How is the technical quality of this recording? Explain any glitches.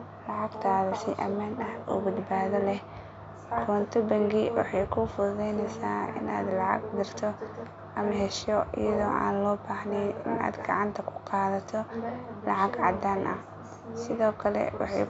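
No technical glitches can be heard anywhere in this recording.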